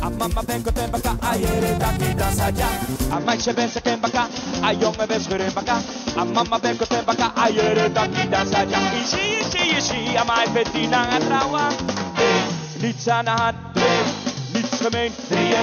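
At 3.13 s the sound abruptly turns duller and boxier and stays that way to the end. From that point nothing reaches above 6.5 kHz, and a faint new background noise, about 55 dB below the signal, sits underneath. There is no gap at the switch and no change in loudness. The likely cause is the input switched to a poorer device. A simple bandwidth drop would not change the tone colour and noise floor along with the top end.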